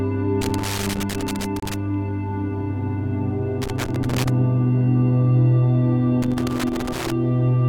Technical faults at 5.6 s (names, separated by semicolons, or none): none